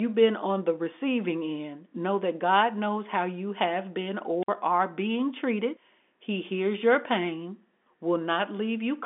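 At 4.42 s, right after "how you have been", a short burst of hiss swells up and the speech drops into a hole of near silence of about 54 ms, returning with "are being treated" by 4.48 s. This is a wireless microphone squelch dropout: the analogue FM radio link faded, the rising noise was the weakening carrier, and the receiver's squelch muted the output until the signal recovered. The narrow telephone band, roughly 250 Hz to 3.5 kHz, carries through the event.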